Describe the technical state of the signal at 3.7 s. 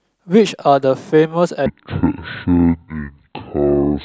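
At 3.7 s the speech sits inside a section at the wrong speed, running from 1.66 s to the end at 0.549× speed. Pitch drops roughly ten semitones, deep and slow, likely from playback against a mismatched clock.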